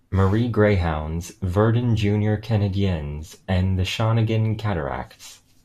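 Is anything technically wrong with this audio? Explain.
No, nothing technically wrong can be heard in this speech recording. The signal stays steady and intact, with no audible breaks, distortion or interference at any point.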